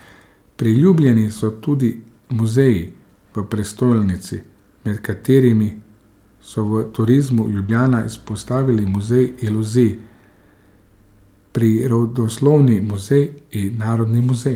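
Between 6.67 and 8.83 s a burst of packets was lost, about thirty, each 20 ms long. Each one was rebuilt from error correction, using the low-bitrate copy carried by the following packet. There are no gaps, but the speech turns intermittently rough and noisy, flickering across those two seconds.

At 7.66 s, inside that burst, 20 ms of audio never arrived in time, with no usable copy. The decoder concealed the packet loss by extending the preceding sound for about 24 ms before blending back. The result is a brief smear or wobble.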